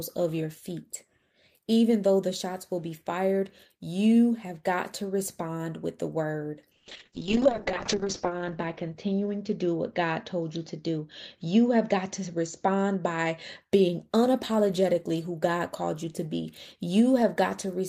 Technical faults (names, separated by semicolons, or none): call bitrate drop